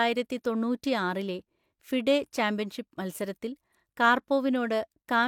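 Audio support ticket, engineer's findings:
Findings: no audio fault detected in the speech clip.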